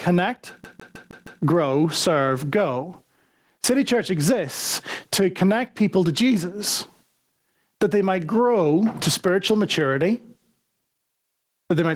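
Throughout the speech, the recording level sounds as though it was likely set far too hot for the microphone, with a fast limiter or compressor clamping down on every loud syllable. This gain pumping swings the level by around 20 dB. Loud and quiet passages sit unnaturally close in level, leaving the speech flattened and squashed.

From 0.64 to 1.42 s, the playback behaves like a CD stuck on one turn, where a scratch knocks the laser back one track at the same point on each revolution. The same 0.16 s slice of audio repeats five times, with a brief mute at every jump. The result is a rapid, evenly spaced stutter, the familiar sound of a skipping disc, before playback moves on.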